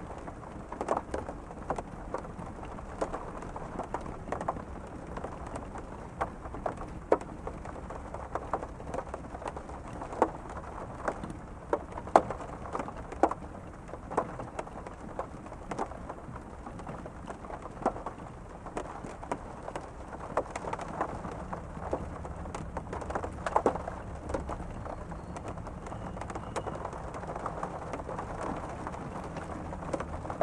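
No technical faults can be heard in this clip, so there is nothing to describe in time order.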